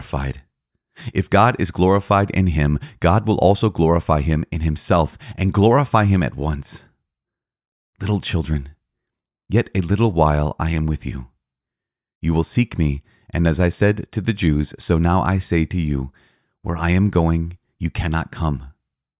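No technical faults can be heard anywhere in the recording.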